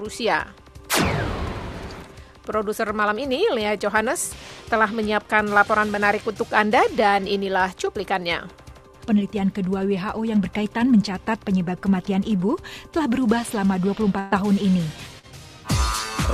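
At 14.19 to 14.34 s the sound turns into a held, fading continuation before jumping ahead. This is a burst of packet loss, with about 120 ms missing and filled by extending the last audio. At 15.19 s a brief smear is short concealed packet loss, where roughly 40 ms arrived too late and was patched over.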